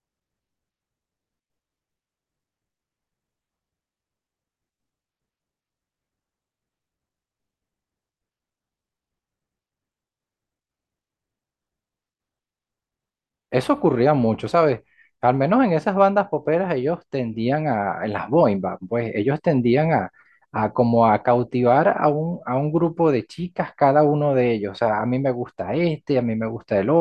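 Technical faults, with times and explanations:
No technical faults can be heard in this speech.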